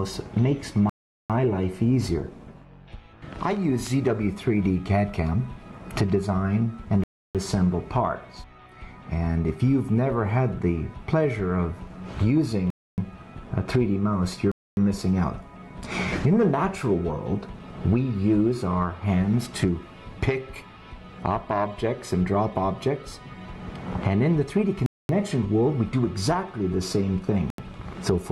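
Six gaps of silence cut in at 0.90, 7.04, 12.70, 14.52, 24.86 and 27.50 s, lasting 0.40, 0.31, 0.28, 0.26, 0.23 and 0.08 s. That's likely a Bluetooth stall: held-up packets emptied the receiver's buffer, so playback paused until they arrived.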